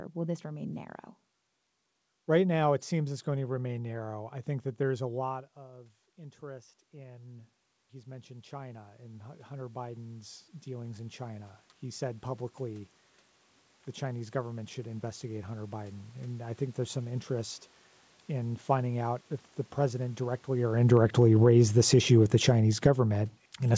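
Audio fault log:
5.57–16.9 s, automatic gain rising: after "that there's a lot", the talker moves away around 5 s and the input drops by about 20 dB. The automatic gain control slowly adds about 19 dB, so voice and room noise swell back together until "some interest in finding".
20.77–23.77 s, automatic gain falling: after "the president directly or", the talker comes closer around 20.5 s and the input level jumps. The automatic gain control then pulls its gain down over the last three seconds, so the voice starts loud and sinks along with the room noise behind it.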